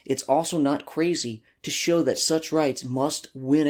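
At 1.15 to 1.21 s, between "it's also not" and "to show that such", there is a lost packet rebuilt from error correction. About 40 ms, consistent with two packets, was replaced by the decoder with the low-bitrate redundant copies carried in following packets. The same happens at 2.79 to 2.89 s, just after "to show that such", over about 60 ms, consistent with three packets. Neither spot leaves a gap; both sound briefly rougher and noisier.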